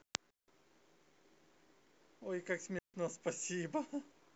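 At 0.31 s the speech drops into a clean hole of near silence lasting about 175 ms, then returns at 0.48 s. A second hole runs from 2.79 s to 2.94 s, about 153 ms. Both are digital wireless dropouts. The receiver lost too much data and muted quickly. No noise burst surrounds either gap.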